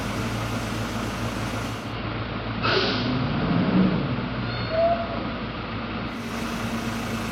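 At 1.65 s the audio shows digital radio blending to analogue: the receiver lost its digital stream and cross-faded over about 322 ms to the station's AM broadcast, returning at 6.38 s. On the AM side the treble dulls, hiss rises to roughly 25 dB below the signal, and the level drops about 1 dB. A spectrogram shows a lower treble ceiling with a raised noise floor across the span.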